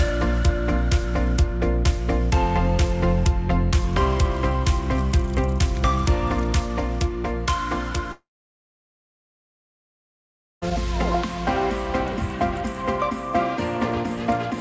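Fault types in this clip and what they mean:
Long network dropout: At 8.12 s the sound breaks into a fading buzz, then near silence for about 2.4 s until 10.64 s. About 2.5 s of audio never arrives. The cause is likely a stalled network link. Playback resumes past the missing stretch.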